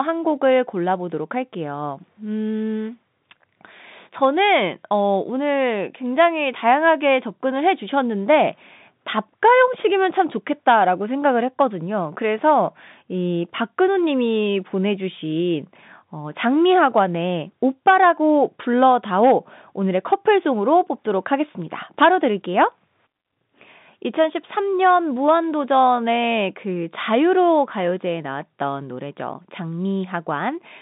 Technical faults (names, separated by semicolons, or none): none